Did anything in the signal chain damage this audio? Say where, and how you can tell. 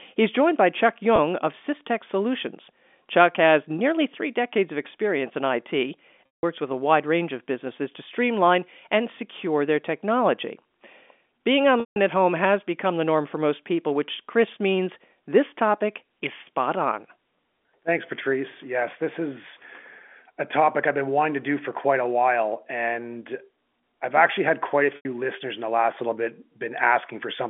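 Yes, at the network stage: packet loss with pitch repetition, four times. At 1.16 to 1.18 s there's a brief buzzy hold. The longer gaps are at 6.26 to 6.43 s before "with a wide range", 11.80 to 11.96 s before "at home has become", and 24.96 to 25.05 s between "actually had quite a" and "listeners in the last". In each, the receiver looped the last pitch period, faded it out over about 50 ms, then cross-faded back in. Gap lengths fit 10 ms packets. The G.711 telephone band underneath sounds as expected.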